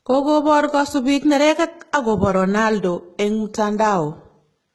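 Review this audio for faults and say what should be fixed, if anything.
HE-AAC compression damages the whole speech clip heavily. The treble sounds synthetic. S sounds come out gritty and lispy, and nothing remains above 11.8 kHz. The upper band is likely rebuilt from copied lower bands, which fits a bitrate near 16 kbps. Encode at a higher bitrate, or with plain AAC, so the treble is coded directly.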